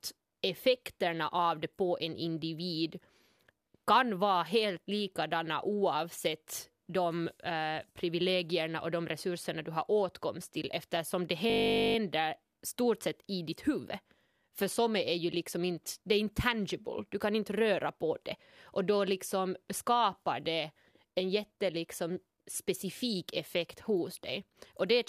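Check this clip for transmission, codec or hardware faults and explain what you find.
One hardware-side fault turns up in this speech clip: a system hang loop from 11.5 to 11.96 s, right after "åtkomst till eftersom det". The computer or its audio driver stalled while the sound hardware kept replaying the same 20 ms stretch of its ring buffer, cycling it 23 times. Because each pass is so short, the repeats fuse into a steady buzz at 50 Hz, a flat mechanical drone replacing the speech for nearly half a second before normal playback resumes with essentially nothing skipped.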